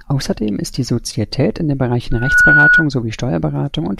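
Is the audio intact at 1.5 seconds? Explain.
Yes, at 1.5 seconds the speech plays through cleanly, with no dropout, click, distortion or other audible fault at that point.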